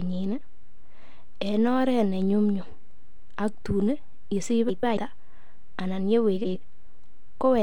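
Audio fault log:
4.68–4.97 s and 6.36–6.56 s, frames out of order: just after "aktun yesich", and again later, two adjacent blocks of about 139 ms each, then of about 93 ms each, play swapped. The result is a garbled flutter. No time is lost.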